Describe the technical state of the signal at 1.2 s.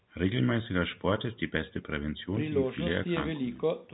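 At 1.2 s the speech is intact, with no fault present.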